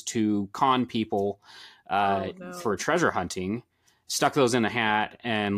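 From 4.36 s, just after "for treasure hunting stuck", the sound turns slightly dull: channel delay (comb filtering), one channel lagging about a sample, cancelling the highest frequencies near 20 kHz.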